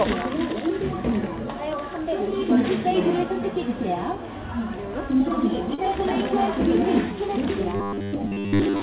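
At 5.74 to 5.80 s comes a short concealed packet loss. About 40 ms of audio never arrived, and the receiver bridged roughly 35 ms by extending the preceding sound before blending back. It is a quick smear or wobble, briefer than a held burst gap.

From 7.76 s to the end at 8.82 s, the sound turns into a rigid, metallic 100 Hz buzz. This is robotic sound from repeated short buffers, likely caused by audio arriving too seldom, so that most of the stretch is a replayed 10 ms slice. The steady pitch marks it apart from concealment.

Inside that stretch, at 8.08 to 8.15 s, a burst of packet loss removes about 60 ms. Roughly 50 ms is filled with the last sound, decaying to a fading hiss or hum. The audio then picks up further on, with the section in between gone. The narrow G.711 A-law call band, with nothing above 4 kHz, colours all of this.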